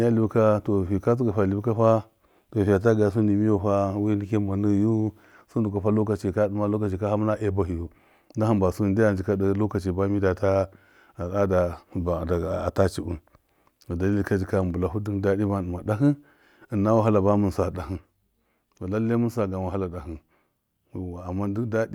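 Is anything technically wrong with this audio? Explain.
Yes. At 17.76 s, right after "bamin sa", a sudden gain jump drops the speech and background noise together by about 5 dB until the end, likely a gain change applied without a ramp.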